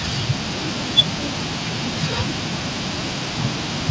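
No technical faults are audible in this speech.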